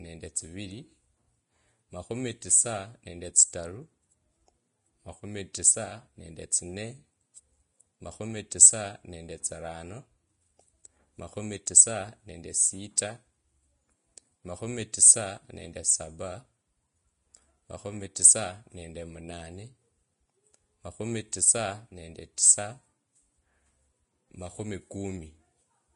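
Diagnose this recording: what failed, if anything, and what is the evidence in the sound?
The codec stage is where this one went wrong, and it's audible for the whole speech clip. Nothing survives above about 10.5 kHz, and the treble that's left sounds hissy and grainy, with roughened tones and softened attacks. That's very likely Vorbis compression at a low setting, consistent with something around 32 kbps: the encoder pulls the cut-off down and quantises the upper residue so coarsely that fine detail turns into noise.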